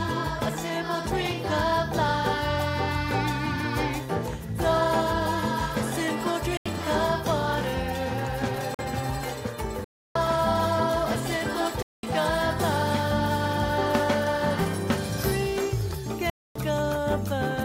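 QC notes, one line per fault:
6.57 to 16.56 s, block of digital silence: the sound drops to silence at 6.57 (85 ms), 8.74 (45 ms), 9.84 (312 ms), 11.82 (208 ms) and 16.30 s (256 ms), cutting out and back with no fade. The first one fits a 4096-sample buffer that wasn't filled in time.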